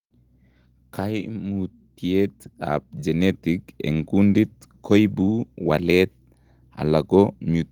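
Speech recording with automatic gain rising between 0.96 and 4.16 s: the gain control judged the input too quiet and ramped its gain up by about 10 dB over those three-odd seconds, so voice and background noise swell together rather than settling at a fixed level.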